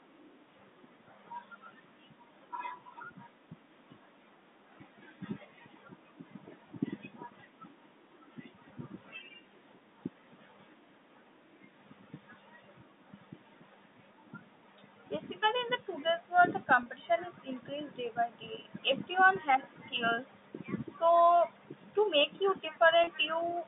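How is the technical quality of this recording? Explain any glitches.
Two short glitches stand out in this telephone-band speech, which has the narrow, boxy character of G.711 telephone coding, with little above 3.7 kHz.

At 16.83–16.86 s and again at 23.04–23.07 s, the speech briefly sounds held and faintly buzzy for about 30 ms. The cause is packet loss with pitch repetition. Each gap, consistent with a single lost packet, was bridged by repeating the last pitch period.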